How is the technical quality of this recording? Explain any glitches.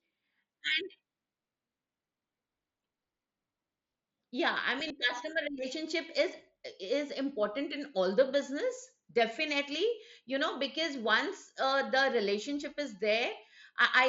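The recording carries one glitch, a brief concealed Bluetooth headset packet loss, heard through the mSBC headset codec, whose wideband path tops out around 8 kHz.

From 4.88 to 4.90 s, about 22 ms of audio went missing on the wireless link, which fits a short run of three lost packets. The receiver filled the gap by repeating the closest-matching slice of the preceding waveform, so you hear a buzzy tone held at full level, then a slight warble as real audio resumes. On a waveform, the gap shows as a short, regularly periodic stretch at full level. On a spectrogram, it appears as flat, evenly spaced harmonic lines with a small smear at the rejoin.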